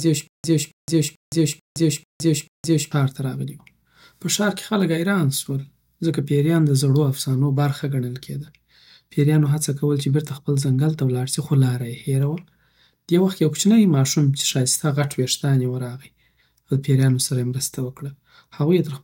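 Speech opens with a stutter with silent gaps, already under way at 0.0 s and lasting to 2.92 s. A 274 ms fragment repeats six times, each followed by 166 ms of digital silence. The likely cause is a stalled stream replaying its last fragment.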